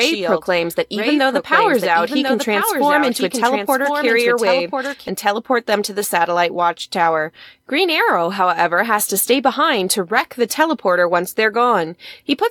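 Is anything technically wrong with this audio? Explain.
Yes, there's a doubled audio track from the very start until about 5.08 s. A second full-band copy of the speech trails the original by roughly a second, sitting a few dB below it. It has no reverb tail or room colour, so it sounds like a flat, detached echo rather than a space. The likely cause is the signal being captured twice, with one path lagging. The copy cuts out abruptly at 5.08 s.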